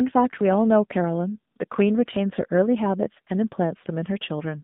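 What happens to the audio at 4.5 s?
At 4.5 s you're still hearing the AMR narrowband mobile codec, which runs through the whole clip. The speech is squeezed into a phone band of about 150 Hz to 3.7 kHz, so nothing above 4 kHz survives. The voice is rebuilt from a vocal-tract model fed with sparse pulses, and the damage is plainly audible: buzzy and synthetic, which fits one of the lower AMR-NB modes, around 7.4 kbps.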